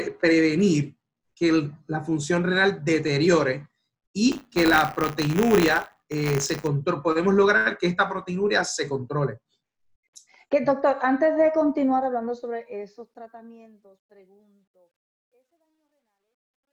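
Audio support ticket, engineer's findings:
Buffer tearing, 4.31 to 6.67 s. Robotic 100 Hz buzz riding on the signal, gone in the gaps. Likely the playback ring buffer: writer and hardware read pointer have slipped and cross every 10 ms period. A small slice of each buffer, a few percent, replays audio from around 30 ms earlier, with hard splices both sides.

Truncation distortion on a fade, 11.77 s to the end. The fade's tail goes gritty, worst from 14.12 s on. That points to a fade or gain stage working at about 12 bits with no dither, so the low end collapses into a few square steps.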